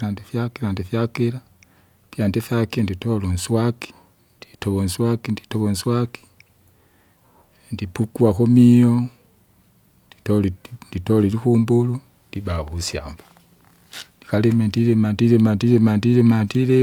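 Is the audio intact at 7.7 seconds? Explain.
Yes, at 7.7 seconds the speech plays through intact, with no dropout, click, distortion or other fault at that moment.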